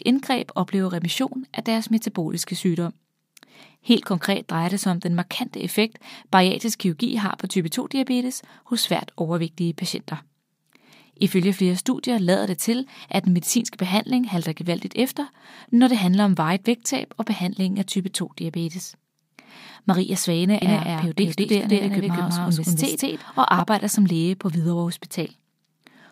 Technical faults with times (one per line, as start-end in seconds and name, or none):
20.62-23.60 doubled audio track